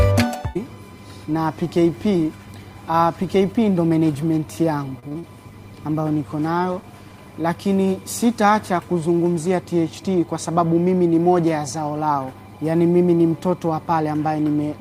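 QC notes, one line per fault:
4.99–5.36 s, repeated packet loss (robotic sound): four short holes, longest 39 ms, patched by stretching prior sound, so it turns choppy, with about 45% concealed.
5.45–7.24 s, call bitrate drop: continuous rough, watery, dulled tone without dropouts, fitting coarser coding after a fall from 32 to about 18 kbps, lowest for 1.7 s.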